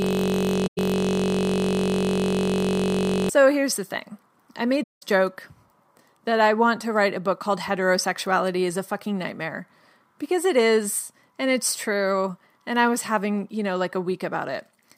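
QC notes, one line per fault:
0.00–3.29 s, system hang loop: the clip opens with the loop already running, and it continues until just before "here's the thing I". A single 21.33 ms slice of audio repeats exactly, about 153 times. This produces a steady buzz at 46.9 Hz instead of moving sound. The sound hardware kept replaying one ring buffer while the system above it had stalled. The loop length fits a 1024-sample buffer.
0.67–0.78 s and 4.83–5.03 s, AAC frame loss with muting: two soft-edged gaps occur where the sound fades out and back in. The first lasts about 107 ms and falls inside the looped section. The second lasts 192 ms, just after "here's the thing I". The decoder zeroed the spectrum of the missing frames, and the overlapping windows smooth the edges into fades. The gap lengths fit five and nine lost frames.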